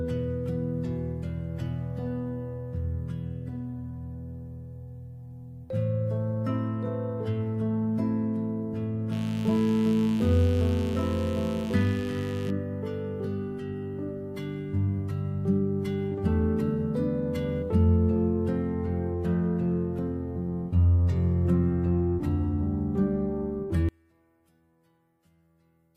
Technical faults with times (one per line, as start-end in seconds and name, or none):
9.12-12.50 mains buzz
23.89-25.96 one channel inverted